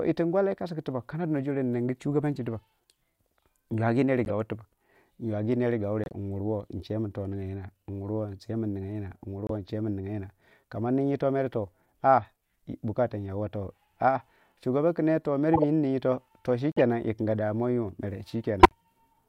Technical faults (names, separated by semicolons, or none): corrupt frame decoded